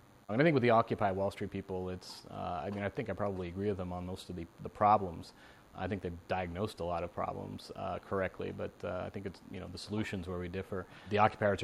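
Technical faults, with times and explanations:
Throughout, DECT cordless phone buzz: a nearby handset or base sends radio bursts 100 times a second, which the audio circuitry rectifies into a faint, thin 100 Hz buzz rich in harmonics.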